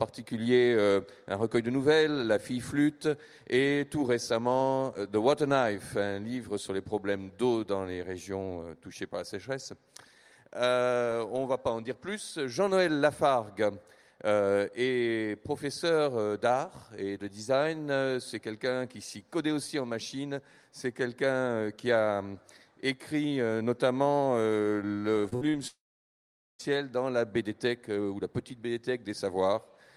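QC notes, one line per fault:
25.21–25.56 s, repeated packet loss (robotic sound): several short holes, the longest about 55 ms, are patched by extending the previous sound, covering roughly 40% of this stretch and giving a choppy texture with pieces missing.
25.67–26.61 s, long network dropout: about 0.9 s of audio is missing; a brief fading continuation gives way to roughly 0.8 s of silence, likely from a lost network connection, before sound resumes without the gap's content.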